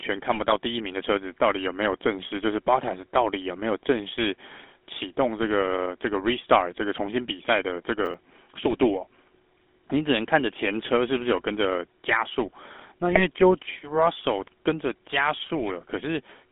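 Throughout, the speech has passed through the GSM full-rate codec, which rebuilds the voice from a vocal-tract model driven by sparse regular pulses and, here, a line band of about 250 Hz to 3.5 kHz. The result is a plainly buzzy, gravelly roughness with no top end, which fits a 13 kbps full-rate link.

From 0.32 to 0.53 s, GSM bit errors reach the decoder at roughly a 1% rate. Corrupted filter, pitch and gain values warp the spectrum frame by frame, so the voice breaks into squawks and gargling across what sounds like about eight frames.

From 8.05 to 8.14 s, processor overload crackle occurs: a run of around five missed deadlines on roughly 10 ms buffers, each skipped outright. The hard-edged gaps stack into a short gritty tear.

From 13.09 to 13.22 s, the same bit-error garbling returns, briefer and closer to four frames long.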